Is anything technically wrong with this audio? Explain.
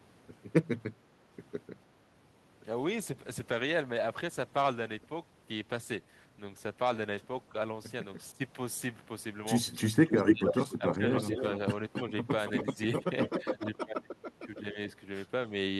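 Yes. The clip has three kinds of fault.

From 2.65 to 8.01 s there is a call bitrate drop. The bandwidth estimate fell, and the encoder went from 64 to 22 kbps for about 5.3 s. Coding became coarser and the high frequencies were cut. The speech sounds rough, watery and muffled.

The speech is turned down at 8.32 to 8.41 s, 9.84 to 11.44 s and 13.38 to 14.77 s. It drops by about 15 dB in the first two spans and about 30 dB in the last. The likely cause is speech suppressed in double talk. The echo canceller could not tell this speech from the other side's, so it turned both down.

From 10.06 to 13.77 s a second copy of the speech follows the original 276 ms late, at about the same loudness. This is likely an echo leak. A loudspeaker on one side fed its microphone, and the echo canceller did not remove the pickup.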